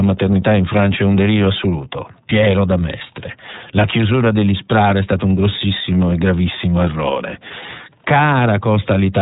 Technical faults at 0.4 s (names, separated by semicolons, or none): iLBC codec